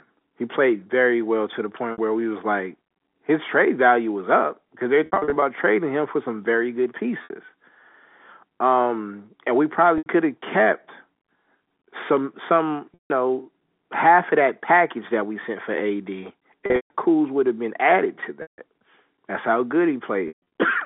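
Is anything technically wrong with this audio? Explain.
Yes, there's packet loss with pitch repetition at 1.92, 5.06–5.42 (after "was up because they're"), 7.24, 9.98, 12.94, 16.66, 18.42 (after "have been added to") and 20.28 s. The receiver loops the last pitch period over each 60–220 ms gap. Short ones sound buzzy and held, and longer runs fade out before the telephone-band speech cross-fades back.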